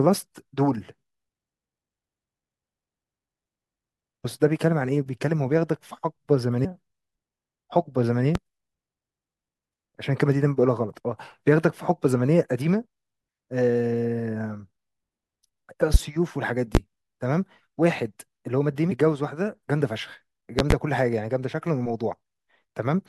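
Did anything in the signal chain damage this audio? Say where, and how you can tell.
Yes. There are two kinds of damage: compressed frames skipped at the codec or storage stage, and loud pops entering before the recording.

Compressed frames skipped occur at 4.24 s and 18.90 s. At each point the speech jumps forward, by about a third of a second at the first and about a fifth at the second. The jump is consistent with whole frames of roughly 24 ms being lost in the file or rejected by the decoder. The missing stretch of audio separates it from a pop.

Loud pops occur at 8.35 s, 15.94 s and 16.75 s, with a double pop from 20.59 to 20.74 s. The first rises about 15 dB above the signal and the later ones about 20 dB. Each is a sharp transient laid on top of the speech, which carries on underneath without any gap. This makes the pops easy to tell apart from the skips. The likely cause is a voltage step in the analogue wiring, from a plug, switch or static discharge, or a driver glitch.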